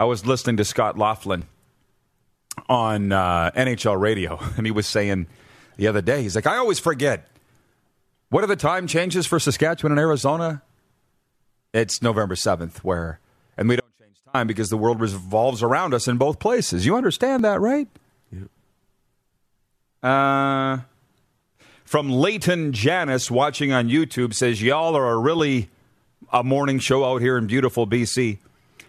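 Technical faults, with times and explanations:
1.42, 9.42 s (after "the time changes for"), 17.39 s (before "that right"), 21.41 s, 25.39–25.41 s: overlap between stream segments. Brief skips spaced at multiples of four seconds, fitting 4-second segments whose overlapping edges were trimmed, removing real sound.
13.80–14.34 s: audio dropout to a faint residue. After "where and we", the sound drops abruptly for 0.54 s to a faint trace far below normal, likely a lost input signal, returning at "because the world revolves".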